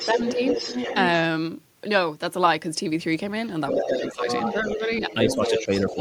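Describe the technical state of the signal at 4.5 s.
At 4.5 s, the other side's voice is leaking through, from 3.68 to 4.79 s. A second voice sits under the main talker, only slightly quieter. It is likely loudspeaker playback reaching the microphone, which the echo canceller did not fully remove.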